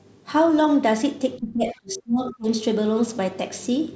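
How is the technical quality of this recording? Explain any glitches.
The recording has one clear glitch, speech suppressed in double talk, between 1.38 and 2.47 s. The likely cause is an echo canceller that, with both ends talking at once, could not separate the near talker from its own loudspeaker echo and so attenuated everything it heard. The voice drops away sharply, by about 30 dB at its deepest, and stays thinned or broken for roughly a second before recovering. Throughout the clip nothing reaches above 8 kHz, which fits a wideband call codec such as G.722.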